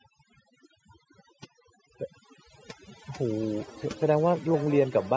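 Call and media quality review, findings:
Overdone noise removal, whole clip: suppressor set too aggressive, muting bands near its noise estimate along with quiet speech detail. Background drops and breaks up into twinkling specks.

Feedback echo between two devices, 3.12 s to end: second device replaying this microphone's audio, re-captured outside the echo canceller's reach. Speech returns about every half second, up to about 17 dB below speech, thinner and ringing. Band-limited to 8 kHz by the call's microphone processing.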